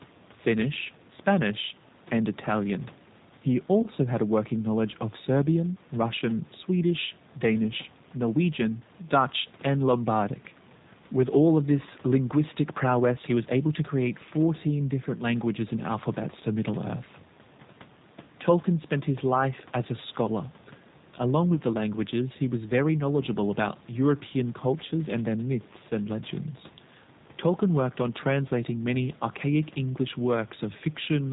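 From start to finish the speech sounds slightly rough and synthetic, with nothing audible above 4 kHz. This is the G.729 codec, and its damage is plainly audible. The sound fits an 8 kbit/s coder of the G.729A kind, which does not send the waveform itself. It sends a vocal tract filter, a pitch predictor and a few pulses for each short frame, and the decoder rebuilds the speech from those. The fine detail that this model cannot capture is lost, and the upper band is gone entirely.

From 3.82 to 3.87 s, just before "had a working knowledge", the speech briefly smears into a stretched, fading sound before recovering. A second, shorter smear of the same kind runs from 21.55 to 21.58 s, just before "the languages he was". Both are VoIP packet loss concealed by the speech codec. Each gap fits a single lost packet of 20 ms. When a packet is missing, the decoder repeats its last pitch and filter at falling gain to fill the hole. 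Because each frame builds on the one before, the speech stays weak or distorted for tens of milliseconds after real packets return.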